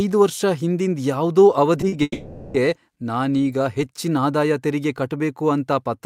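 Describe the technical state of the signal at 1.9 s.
A short stall from a late packet runs from 1.88 to 1.94 s: the jitter buffer emptied, so about 40 ms of sound is held and stretched, then resumes without loss.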